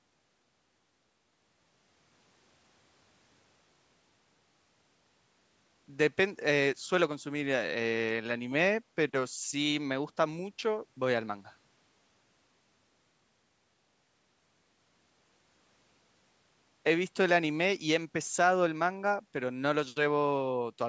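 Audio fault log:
No faults heard; the call microphone processing sounds normal.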